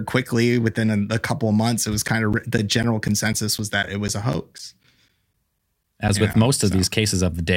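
A speech recording with periodic USB or driver dropouts: starting just after "couple months it was", at 2.08 s, and running to 6.34 s, around twenty brief gaps of about 10 ms cut into the voice, each replaced by silence. They land every 0.25 s, giving a steady tick four times a second. That strict regularity, audible only while the voice sounds, sets them apart from the random clicks of dust, damage or sporadic buffer underruns.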